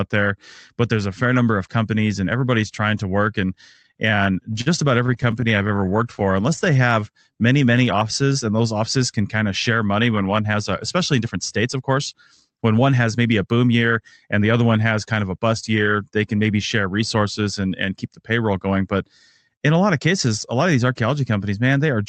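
Packets arrived late or too slowly in two stretches of this speech clip, 3.73 to 4.68 s and 5.06 to 6.77 s, so the jitter buffer kept running dry, causing repeated stalls (stutter). The receiver stretched the last sound through each gap, up to 50 ms in the first stretch, so nothing is lost but the speech catches and drags. From 5.89 to 8.63 s the jitter buffer slow-down builds up a reserve by repeating pitch periods, adding about 272 ms. Speech plays at 90% speed with unchanged pitch, giving drawn-out sounds. Later, from 10.44 to 14.29 s, a jitter buffer speed-up sheds excess buffered audio by cutting out short pitch-period pieces, roughly 0.3 s in all. Speech runs at about 107% speed and sounds hurried. The call path's Opus coding limits the top end to around 8 kHz.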